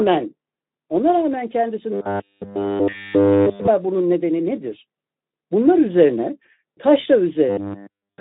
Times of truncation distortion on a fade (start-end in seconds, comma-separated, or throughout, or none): none